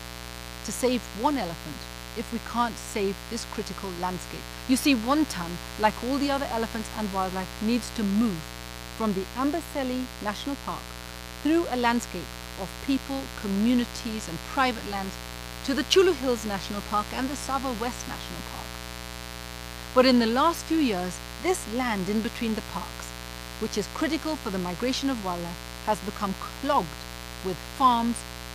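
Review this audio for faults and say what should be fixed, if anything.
Mains buzz runs throughout: switching spikes at 120 per second add 60 Hz harmonics into the kilohertz range, only about 10 dB below the sound, showing as evenly stacked horizontal spectrogram lines. Fix it by shielding and grounding the cabling properly and keeping dimmers and rectifier supplies off the audio circuit.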